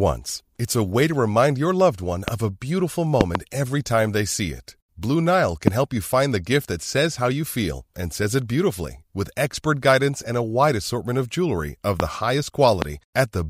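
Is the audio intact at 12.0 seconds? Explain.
No. A loud pop hits at 12.0 s, lasting about 0.02 s, just after "assortment of jewelry of". It is a single sharp click, around 20 dB above the speech, which continues beneath it. A sudden voltage spike, likely from a switch, plug or static discharge, caused it.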